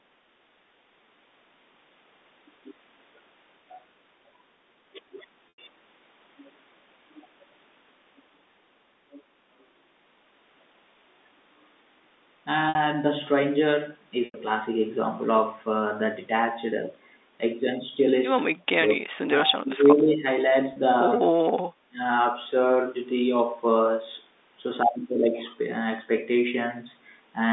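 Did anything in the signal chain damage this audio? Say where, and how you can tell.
Yes. The network stage shows packet loss with pitch repetition at four points: 5.49 s (90 ms gap), 12.69 s (60 ms), 14.25 s (90 ms) and 20.73 s (30 ms). Each gap is bridged by the receiver looping the last pitch cycle, which gives a brief held, buzzy tone. The longer ones fade toward silence before the speech resumes through a short cross-fade. The 30 ms steps in gap length fit 30 ms packet frames.

The call processing stage shows speech suppressed in double talk. Between 18.48 and 20.25 s the speech dips and breaks up in pieces, adding up to roughly a second and a half, with the deepest drop around 35 dB. There are shorter dips at 21.23 s, about 15 dB, and from 21.84 to 21.98 s, about 25 dB. The likely cause is the echo canceller failing to separate the near-end talker from far-end speech echoing from the loudspeaker, and attenuating both.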